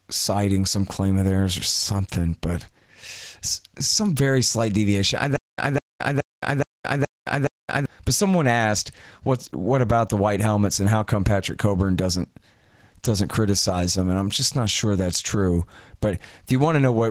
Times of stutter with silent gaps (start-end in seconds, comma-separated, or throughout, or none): 5.36-7.86